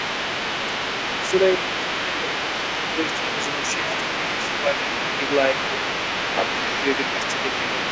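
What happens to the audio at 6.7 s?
With both sides talking at once, the echo canceller most likely could not separate the talker from the loudspeaker echo and turned everything down. This is speech suppressed in double talk, running from 6.42 to 6.81 s. The talker's voice dips by about 10 dB at its deepest, losing level in pieces that add up to roughly a fifth of a second. Within that span the voice sounds ducked and briefly broken while the other side is speaking.

Underneath this, and for the whole clip, the other side's voice is leaking through. The device plays the far end on a loudspeaker, and the canceller likely left part of it in the microphone signal. That second voice sits around 10 dB below the talker, an extra voice that overlaps the dip at 6.7 s.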